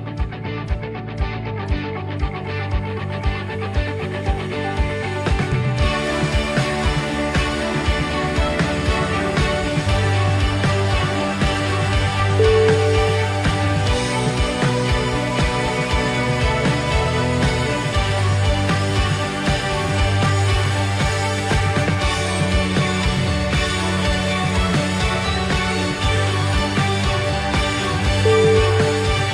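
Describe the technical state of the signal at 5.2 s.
At 5.2 s the signal is intact, with no dropout, distortion, glitch or other audible fault at that moment.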